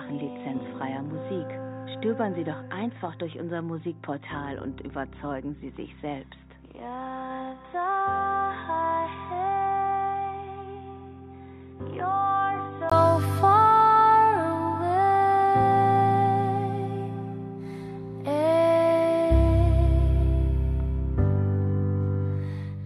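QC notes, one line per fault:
0.00–12.92 s, input switched to a poorer device: dull and boxy, with nothing above 3.8 kHz, roughly 10 dB quieter, and a separate noise floor around 40 dB below the signal. A 20 ms gap at 12.92 s precedes full-band sound, likely a return from a narrower input device.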